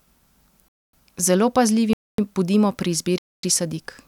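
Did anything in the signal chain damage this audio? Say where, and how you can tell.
Yes. The damage is a gap between chunks at the streaming or playback stage. Silent holes, each 250 ms long, fall at 0.68–0.93 s, 1.93–2.18 s and 3.18–3.43 s, with one second of speech between them. The audio was delivered in one-second chunks with dead time inserted at each join. The speech resumes exactly where it stopped, so nothing is lost, only interrupted. On a waveform, each hole is a flat line with abrupt edges. On a spectrogram, each is a clean vertical blank band across all frequencies.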